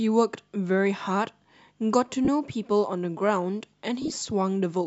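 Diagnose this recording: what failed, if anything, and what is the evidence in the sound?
Lost LE Audio frames on the Bluetooth link, 2.25–2.28 s and in short bursts across 4.02–4.22 s: LC3 concealment replays the last spectrum with random signs, smearing speech into noise.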